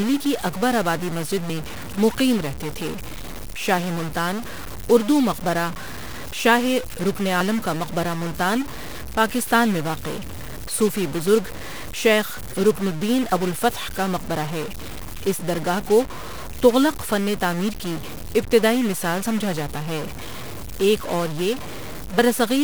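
A speech recording, likely with one converter data bit stuck at a fixed value, so distortion runs throughout and the pauses fill with noise. Audio missing between chunks, likely from a recorder losing about 40 ms each time it closes one 3 s chunk and opens the next, causes abrupt skips at 1.50 s (after "کی اکبر آبادی مسجد", before "میں مقیم رہتے تھے"), 4.45 s (after "شاہ ملتان", before "اردو مقبرہ"), 13.32 s (after "بزرگ شیخ رڪن الدین", before "ابوالفتح کا مقبرہ ہے") and 22.19 s.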